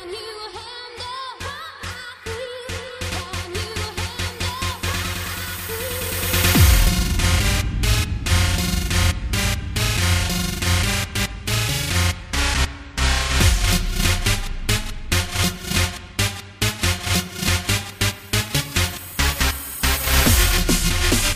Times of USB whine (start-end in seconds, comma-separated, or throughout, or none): 5.35-7.39